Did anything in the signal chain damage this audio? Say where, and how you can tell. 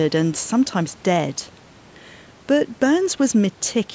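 No, nothing in this speech stood out on listening as damage from any stage of the chain, and the call microphone processing it passed through, with its top end stopping at 8 kHz and the lowest bass trimmed, is working as intended.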